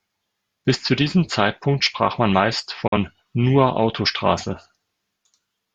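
A digital broadcast dropout cuts into this speech clip from 2.87 to 2.98 s, right after "sprach man meist". The receiver stopped getting usable frames and muted its output, so the sound fades to silence in about 8 ms and stays silent until good frames come back. The missing stretch is roughly 43 ms of programme, which points to a single lost frame. That audio is gone rather than delayed, so the speech jumps ahead where it resumes.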